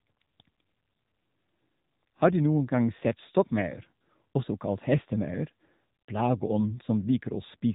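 Throughout, the speech passes through an AMR narrowband mobile codec at a low rate, likely near 8 kbps, leaving it buzzy and synthetic, with nothing above 3.8 kHz.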